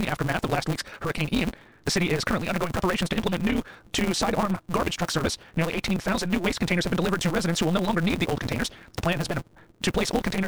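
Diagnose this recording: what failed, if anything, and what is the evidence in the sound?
Buffer-stage block size mismatch (truncated): a 172 Hz buzz throughout, speech running 1.88 times fast with its timbre intact, which fits 256-sample reads discarding each block's tail.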